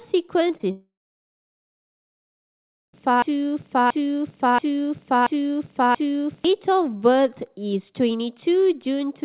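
Short concealed packet loss hits at 0.48, 0.57 and 0.61 s. Packets arrived too late, so the receiver patched each gap. Each one sounds like a quick smear or wobble.

From 0.71 to 2.95 s there is a long network dropout. The last sound trails off briefly, then about two seconds of silence follow. Audio was likely lost in transit.

From 3.22 to 6.45 s, a broken-record loop repeats one 0.68 s fragment exactly, five times. A stalled stream likely kept resending its last piece.

The narrow call band, with nothing above 4 kHz, is audible throughout.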